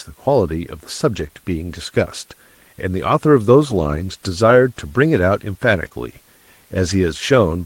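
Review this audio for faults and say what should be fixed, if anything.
A steady, even hiss sits under the speech for the whole clip, roughly 35 dB below it, with no crunch or grit riding on the words. That's low bit depth with dither. The audio has been squeezed down to very few levels, which fits something like 9 bits, and dither was added before the rounding, so the quantization error comes out as flat white noise instead of distortion. To prevent it, keep the recording and any intermediate files at 16 or 24 bits and only reduce bit depth at final export, if at all.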